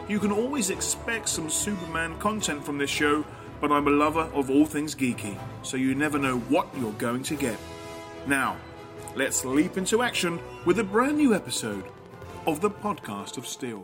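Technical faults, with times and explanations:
11.49–13.77 s, train of clicks: a steady ticking of about 12.3 clicks per second, evenly spaced, roughly thirty in all, each peaking at about the level of the surrounding sound. The near-identical pulses most likely come from interference or a faulty connection or power supply. On a waveform they appear as a row of equal, regularly spaced spikes. On a spectrogram they form a comb of thin vertical broadband lines.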